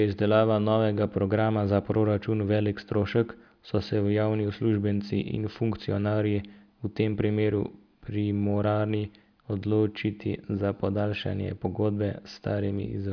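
No technical fault can be heard anywhere in the recording, and the signal holds steady throughout with nothing breaking into it.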